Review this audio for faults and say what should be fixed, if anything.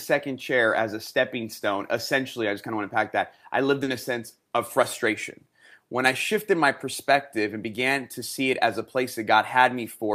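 Short concealed packet loss at 3.83 to 3.89 s: about 40 ms of the call arrived too late for the decoder, which covered the gap by extending the preceding sound and blending back, leaving a brief smear. A larger jitter buffer or forward error correction would prevent it.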